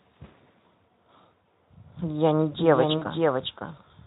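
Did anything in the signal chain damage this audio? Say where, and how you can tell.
Yes. The network stage dropped packets and the Speex decoder, otherwise running at its light 15 kbps coding, papered over them with VoIP packet loss concealment. At 1.44 s there's a brief smeared blip, and from 2.97 to 3.05 s a stretched, fading sound. These fit one and then two lost 20 ms frames being extrapolated.

From 2.32 s to the end there's a doubled audio track. A clean, full-band copy sits about half a second behind, maybe 5 dB quieter, and it jumps in abruptly with no room tail. That's likely a second, slower capture path feeding the same mix.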